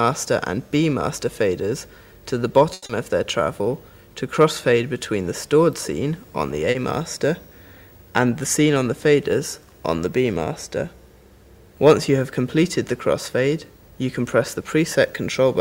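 The audio has network playout faults. From 2.73 to 2.84 s there is a short stall from a late packet: the jitter buffer ran dry, so the receiver held the last sound for 90 ms and then resumed where it stopped, losing nothing but adding 90 ms of delay. Two short concealed packet losses follow, at 2.86 to 2.91 s and 6.71 to 6.77 s. In the first, 60 ms never arrived and 30 ms of extrapolated sound covered it, pulling the delay back by roughly 30 ms. In the second, 40 ms was replaced by 40 ms of continued sound blended back into the real signal.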